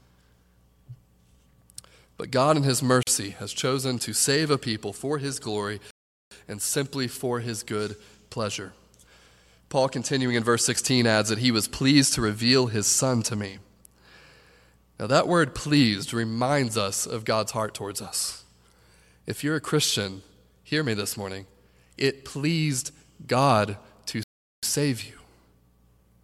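At 3.03 s the speech drops out for about 41 ms, until 3.07 s, just before "has chosen to save". This is a gap at a join of encoded pieces. Two separately encoded sections were butted together untrimmed. The encoder's start-up delay and end padding survive as a short hole of silence. Its edges are smeared by the codec. The speech then picks up exactly where it broke off.

At 5.91 s the speech halts for about 406 ms, resuming at 6.31 s on "and simply for". At 24.23 s it halts again for about 394 ms, returning at 24.63 s on "save you". Each is a playback stall. The player was likely starved of data or blocked, so output went silent. These silences are long and land mid-flow.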